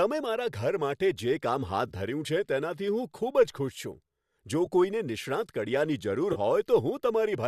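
Speech with three brief smeared, noisy patches at 1.88–1.91 s, 4.66 s and 6.33–6.38 s. This is AAC frame loss with concealment: the decoder rebuilt roughly 20, 10 and 30 ms of missing audio from the previous spectrum, which fits dropped low-delay AAC frames of about 10 ms each, likely from an AAC-ELD stream near 64 kbps.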